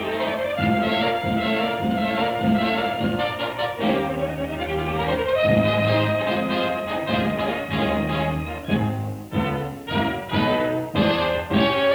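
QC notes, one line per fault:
Throughout, low bit depth with dither: a steady, even hiss sits about 30 dB under the sound, with no grit or distortion. That fits roughly 8-bit resolution, where dither added before rounding turns the quantisation error into constant white noise.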